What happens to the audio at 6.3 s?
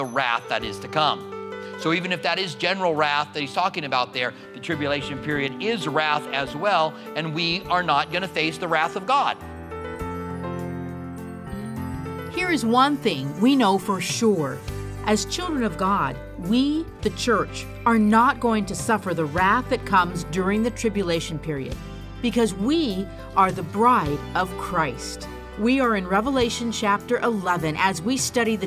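Nothing goes wrong at 6.3 s; the audio carries on cleanly through that moment without any dropout, glitch or other fault.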